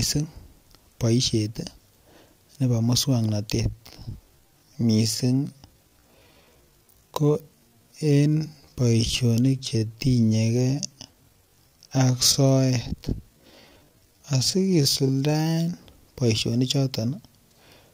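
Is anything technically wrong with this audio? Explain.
Yes. A time-stretched section runs from 3.59 s to 15.77 s, where the speech is slowed to about 0.64 times its normal pace while its pitch stays unchanged. This is likely the work of software stretching the passage to fill a longer duration, repeating short fragments of the waveform to lengthen it without lowering the pitch. The pace drops abruptly at the start, and the drawn-out speech drags until normal speed returns.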